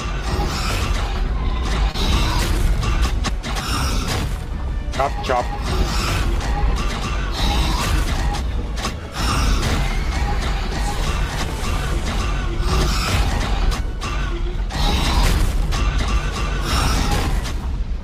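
A short concealed packet loss hits at 1.91 to 1.96 s. About 20 ms of audio arrived too late for the decoder, and the receiver filled roughly 24 ms by extending the preceding sound before blending back into the real signal. The result is a brief smear or wobble in the audio there.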